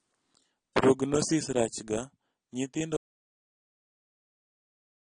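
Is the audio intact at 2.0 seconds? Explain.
No, at 2.0 s the speech carries the same damage it has throughout the clip. Nothing comes through above about 9.8 kHz, so it sounds dull, and there's a plainly audible smeared, warbly texture, fizzy on the sibilants. That's likely AAC compression: AAC-LC at a low bitrate, around 22 kbps by the sound of it, has to drop the top end and quantise the remaining bands coarsely, which leaves those gaps and the swirly grain.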